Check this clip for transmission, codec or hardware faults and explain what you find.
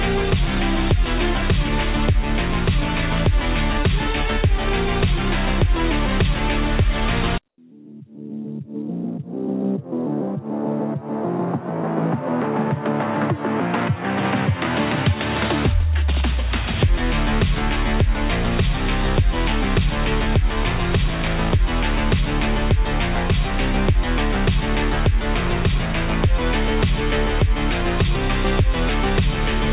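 One fault stands out, at 7.48 to 7.58 s: for 100 ms the background gives way to a steady, featureless hiss about 22 dB lower. This is likely comfort noise in place of the background. The sender stopped transmitting during quiet, and the receiver synthesised smooth filler noise. Unlike a dropout, the gap is never silent, and it carries the same 4 kHz ceiling as the rest of the call audio.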